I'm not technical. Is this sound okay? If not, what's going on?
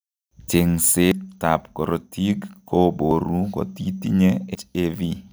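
No. The speech has three sudden small jumps forward, at 1.12 s (just before "ab korotik"), 3.11 s and 4.55 s. This is likely a dropped buffer (overrun): the recording program fell behind, so a short chunk of audio was overwritten before it was saved, and the two ends were stitched together. About a tenth of a second is missing at the first and last points, and about a twentieth at 3.11 s.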